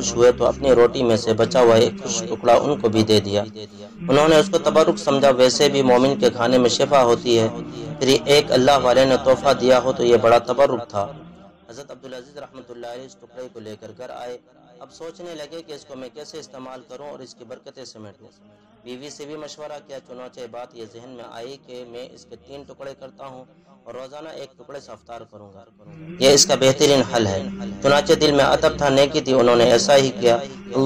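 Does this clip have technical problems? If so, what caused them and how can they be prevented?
Yes. Between 25.48 and 26.14 s the gain is moved by roughly 20 dB, but the change is applied in discrete jumps, around 200 per second, rather than as a continuous ramp. Each jump puts a tiny discontinuity into the waveform, so the level move carries zipper noise: a fine ticking, buzzing texture riding on the sound for those two-thirds of a second. To prevent it, interpolate the gain per sample or smooth it across each block so the level glides instead of stepping.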